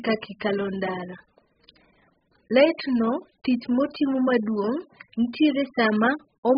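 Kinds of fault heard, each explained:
AAC compression: Dull, smeared speech with nothing above 5 kHz and heavy artefacts, likely from AAC-LC coding at a very low bitrate, around 8 kbps.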